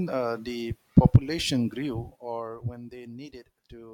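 Zipper noise runs from 1.67 to 2.66 s, as the speech level drops by roughly 15 dB in discrete 1 dB steps instead of a smooth ramp. Each jump clicks, giving a fast ticking, around fifteen per second, that zips along under the voice.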